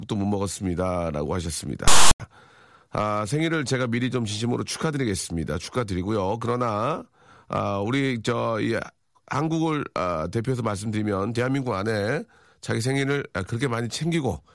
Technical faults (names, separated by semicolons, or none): file tags played as audio